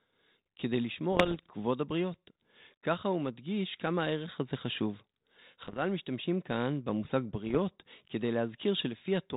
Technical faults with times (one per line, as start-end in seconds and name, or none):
1.12-1.51 bit errors on an ADPCM link
5.62-5.79 bit errors on an ADPCM link
7.47-7.59 bit errors on an ADPCM link